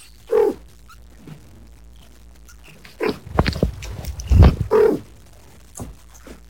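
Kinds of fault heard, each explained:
Stuck bit: the whole clip has a harsh, buzzy grit, and the quiet gaps fill with noise at around -40 dBFS. That points to one data bit likely jammed at a fixed value, knocking roughly half the samples off by that bit's weight.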